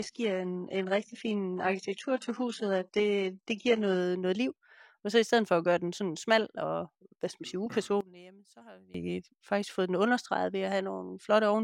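From 0.0 to 4.0 s, before "noget liv", the adaptive stream is starting at a low bitrate. Nothing sits above 11.1 kHz and the artefacts suggest a low-rate HE-AAC version near 12 kbit/s, before a sudden, gapless step up to something like 96 kbit/s AAC-LC.

From 8.01 to 8.94 s, between "hvad skal man sige" and "faktisk fået den understreget", the speech collapses by about 21 dB into a faint residue, likely one channel inverted and cancelling the centred voice in a mono sum.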